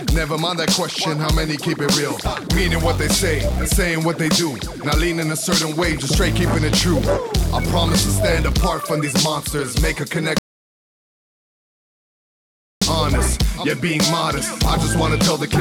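At 10.38 s the input feed was likely lost, and the recording carried on writing silence until 12.82 s. That produces an audio dropout to silence lasting 2.43 s. The sound cuts off mid-flow into dead silence with no room tone, then resumes abruptly, and whatever occurred in the gap is missing.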